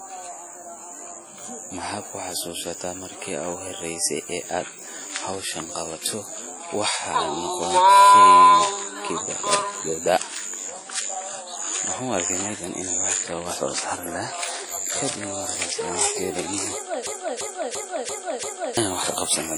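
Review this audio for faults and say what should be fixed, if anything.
Throughout the speech, the sound rings and washes, with hiss that swells and fades with the signal and nothing above 20.1 kHz. That points to heavy WMA compression, likely at a low bitrate around 32 kbps, with quantisation noise smeared across long transform blocks. Prevention: encode at a higher bitrate, or keep a lossless master for review.

At 1.42 s and 14.42 s, a bit error spike occurs: a flipped bit throws a sample far off and straight back, giving one sharp broadband tick unrelated to the speech. Prevention: use memory and transport links with error detection or correction.

From 17.07 to 18.77 s, there is a system hang loop: the computer or driver froze while the audio hardware replayed its ring buffer. A 341 ms fragment repeats five times at 2.93 Hz, a skipping-record repetition replacing about one and a half seconds of audio. 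Prevention: give the audio thread real-time priority and have the driver mute the output when the buffer stops refilling.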